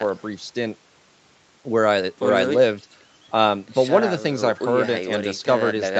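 No technical faults are audible.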